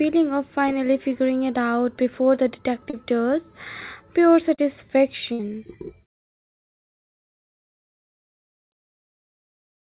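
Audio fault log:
2.90 s and 4.55 s, short concealed packet loss: about 30 ms vanished after "it out before the" and after "does pure." The receiver stretched the preceding sound across each gap, leaving a brief smear.
5.33–5.42 s, burst of packet loss: about 60 ms of consecutive audio never arrived. The receiver continued and faded the last sound, so the audio jumps ahead with that stretch missing.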